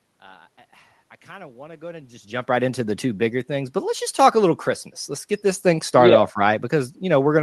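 Speech with no technical fault anywhere in the recording. What can be heard of the path is ordinary call-codec coding, with the top of the band ending around 12 kHz as expected of Opus, under room noise and a level change near 2.0 s where the talker shifts position.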